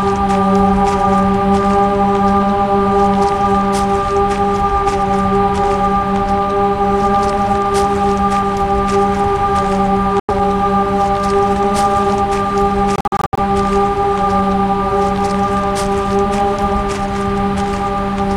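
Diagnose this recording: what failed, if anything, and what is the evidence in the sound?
The playback stage failed, with a Bluetooth dropout on the wireless link to the headphones as the likely cause. At 10.20 s the sound cuts to silence for about 93 ms, then resumes further along, as though it had kept playing underneath. From 12.96 to 13.39 s, several short holes remove roughly 255 ms in total, and the longest is about 70 ms. A waveform shows flat gaps with abrupt or briefly faded edges. A spectrogram shows blank vertical bands across all frequencies.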